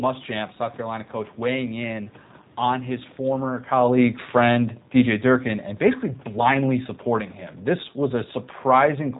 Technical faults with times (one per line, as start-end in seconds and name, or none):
0.00-9.19 G.729 codec